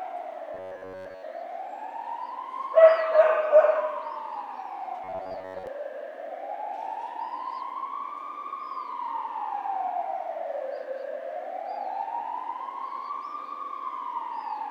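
From 0.54 to 1.24 s, and again from 5.04 to 5.67 s, the everyday sounds turn into a rigid, metallic buzz pitched at 93.8 Hz. This is robotic sound from repeated short buffers, likely caused by audio arriving late so that the last 10.7 ms or so is looped over and over, replacing most of the real material. A steady fixed tone overlays the sound's rough shape.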